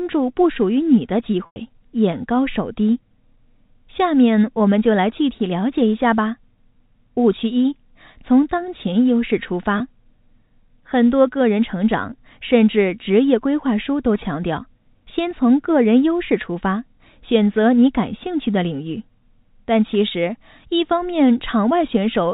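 At 1.46 to 1.56 s and 9.78 to 9.80 s, packet loss with pitch repetition fills gaps of 100 ms and 20 ms by looping the last pitch period. The sound holds briefly and turns buzzy. A spectrogram shows frozen, evenly spaced harmonics, and the waveform shows identical cycles shrinking.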